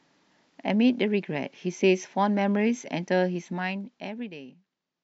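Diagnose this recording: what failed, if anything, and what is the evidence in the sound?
The failure is zipper noise from a gain stage in the processing chain, applied once per buffer or control update. From 3.34 to 4.78 s the speech drops by around 20 dB, and a fine ticking rides on it at roughly 20 steps per second. Each tick is a 1 dB jump with no interpolation between steps. A smooth fader move would fall just as far without that regular ticking.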